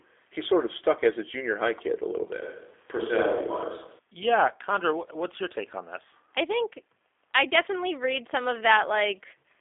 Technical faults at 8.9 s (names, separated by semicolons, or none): G.729 codec